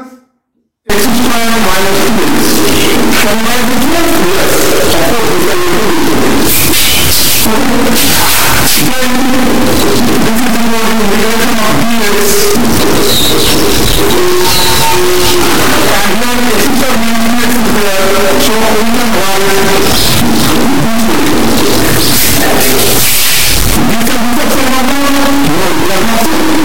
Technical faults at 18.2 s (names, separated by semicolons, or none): stuck bit